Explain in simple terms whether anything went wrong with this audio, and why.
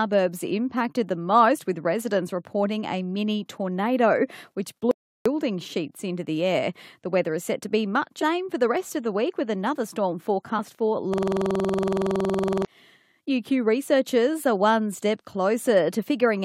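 Yes, three kinds of fault can be heard in this speech clip.

Audio dropout to silence: after "a mini tornado which", the sound cuts off completely from 4.91 to 5.26 s, about a third of a second, then resumes at "sheets into the air". The gap is dead digital silence with no room tone at all, so whatever was said in it is lost. The likely cause is the input signal briefly disappearing, from a loose connection or an accidental mute, while the recorder kept writing silence.

Damaged data in a compressed stream: two short blips interrupt the speech. The first runs from 8.21 to 8.23 s, between "set to be much" and "for the rest of". The second comes at 10.58 s, just after "week with another storm". Part of the compressed file was corrupted there, so the decoder misread those frames and had to resynchronise before clean playback returned.

System hang loop: from 11.14 to 12.65 s, one 46 ms slice of audio repeats exactly, over and over, about 33 times. 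Because the slice is so short, it comes across as a steady buzz at about 21.5 Hz rather than as speech. The computer stalled while the sound hardware kept replaying the same buffer, and the length of the slice fits a 2048-sample buffer.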